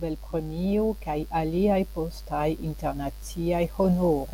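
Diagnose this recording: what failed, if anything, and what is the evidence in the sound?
Mains buzz runs throughout the speech, a steady, raspy buzz sitting around 30 dB below it. This points to the analogue wiring: a dimmer, rectifier or unshielded run let sharp spikes in twice per 50 Hz cycle, spreading harmonics up to several kHz.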